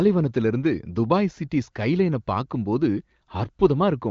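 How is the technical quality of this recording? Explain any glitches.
No glitches to explain here; the speech simply sounds like an HD Voice call, with the AMR wideband (HD Voice) codec's top end stopping at about 7 kHz as it normally does.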